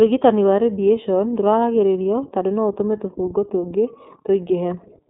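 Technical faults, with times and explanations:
Throughout, iLBC codec. Nothing above about 3.7 kHz survives, so the speech sounds narrow and boxy. Each 30 ms frame is coded on its own, giving a plainly audible rough, synthetic edge. The frame length fits iLBC's 13.33 kbps mode.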